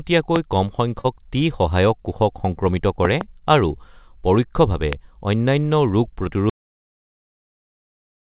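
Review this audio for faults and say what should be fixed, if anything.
Loud pops land at 0.36–0.38 s, at 3.05–3.23 s as a double pop just before "আৰু পৰোক্ষভাৱে", and at 4.93–4.95 s right after it. They peak roughly 15–20 dB above the speech, likely from a plug, switch or static discharge. Each appears as a narrow vertical full-band stripe on a spectrogram and a tall spike on the waveform. Secure connectors and ground the equipment to prevent this.

A short concealed packet loss at 1.00–1.07 s, just before "টি সহায়ক কোষক", left about 40 ms missing. The receiver filled the gap with a synthesized continuation of the preceding sound, which is heard as a brief smear. A deeper jitter buffer or a more stable network would prevent it.

An audio dropout to silence starts at 6.50 s and lasts to the end. The input was likely disconnected while recording continued writing silence. The waveform becomes a flat line and the spectrogram goes dark, with no room noise at all. 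Check cables and mute controls before and during recording. The audible band stops at 4 kHz, which fits the G.711 mu-law call path.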